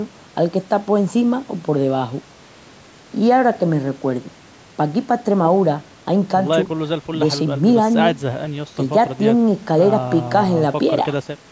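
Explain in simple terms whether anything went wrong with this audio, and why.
Nothing went wrong here.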